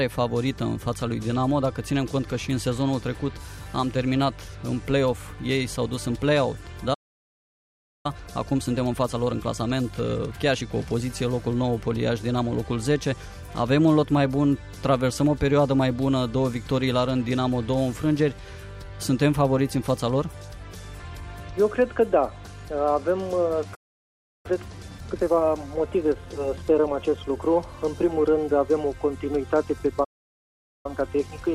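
At 6.94 s the sound just stops dead for about 1.1 seconds, picking up again at 8.06 s. That's a playback stall: the output goes silent mid-flow and then carries on. The likely cause is the player running dry of buffered data or its thread getting blocked. The same thing happens at 23.74 s for roughly 0.7 s, resuming at 24.46 s, and again at 30.04 s for about 0.8 s, back at 30.86 s.

Right after each gap you get time-compressed catch-up, where the player trims its backlog by snipping out tiny slices and cross-fading over the joins. From 8.06 to 11.06 s and from 24.46 to 27.46 s it runs about 1.15 times normal speed. From 30.86 s to the end it runs about 1.1 times. The pitch stays put, but everything sounds hurried.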